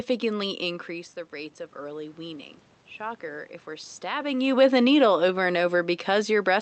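From 1.75 to 4.05 s, automatic gain rising can be heard. The level reaching the microphone dropped by about 11 dB, as if the talker had leaned back. The gain control judged the input too quiet and pushed its gain up slowly, by about 3 dB over those 2.3 seconds. Voice and room noise swell together. The lift is gentle and only partly makes up the loss, so the speech stays quieter than before.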